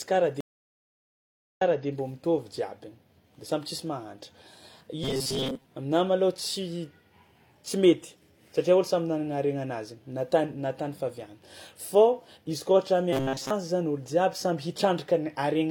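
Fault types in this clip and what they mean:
Stream reconnect: the connection dropped and a fresh decoder restarted mid-stream, leaving about 1.17 s of silence, then the speech resumes about 0.3 s earlier.
Robotic sound from repeated short buffers: likely starved playback looping the last 7.5 ms of audio, forcing a metallic 133 Hz buzz over the speech at 5.04–5.64 s and 13.13–13.50 s.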